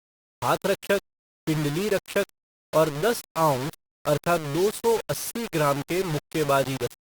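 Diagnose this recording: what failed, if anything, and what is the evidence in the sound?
Grainy, signal-following distortion runs through the whole speech, sitting only about 15 dB below it; likely low bit depth without dither, rounded to roughly 4 bits at sample-format conversion.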